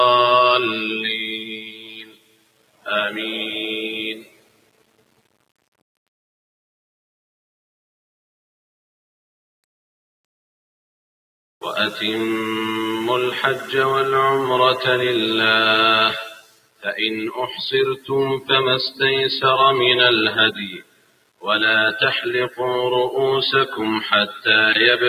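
Low bit depth without dither runs through the whole clip: a grainy distortion that follows the sound, about 25 dB below it, likely from rounding to roughly 6 bits without dither. A noise suppressor applied to music or sounds is also active throughout, treating held tones and tails as noise, so the level pumps and thins by about 20 dB while attacks pass through. The sound is cut by the noise suppressor from 0.79 to 2.88 s, 4.15 to 6.08 s, 16.3 to 16.86 s and 20.69 to 21.46 s, each sinking by about 20 to 21 dB, and briefly at 24.27 to 24.46 s by about 11 dB, as steady passages are pulled down.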